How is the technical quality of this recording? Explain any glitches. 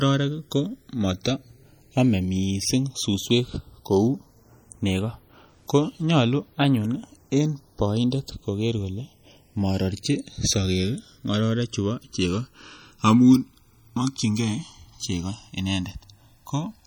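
The technical quality is poor. Two faults run through the whole speech recording.

The first is channels drifting apart, from start to finish. The two channels came from devices on separate clocks, off by roughly 100 ppm. The delay between them grows to about a millisecond by the end. Summed to mono, comb notches sweep slowly through the spectrum. It sounds like slow flanging.

The second is plainly audible coding damage, present throughout. Its likely cause is MP3 compression, at a rate that fits around 48 kbps. Short of bits, the encoder zeroes weak frequency lines, which flicker on and off between frames. The speech sounds watery and swirly. S sounds chirp metallically, and attacks smear.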